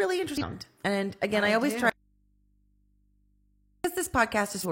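At 0.38 to 0.44 s, and again at 4.60 to 4.66 s, the speech is broken by a brief burst of disturbance lasting about 60 ms each time. These are damaged data in a compressed stream. Part of the encoded data was wrong at those points, so the decoder misread or rejected the frames there, lost its sync and had to search for the next valid frame header before normal playback could resume.

From 1.90 to 3.84 s, just after "I I always do", the speech cuts off abruptly for about 1.95 s. Only mains hum remains, roughly 40 dB below the speech level, and then the signal returns just as suddenly. This is an audio dropout to a faint residue. The wanted signal was likely lost before the rest of the path, which stayed live and let the hum from the open input through.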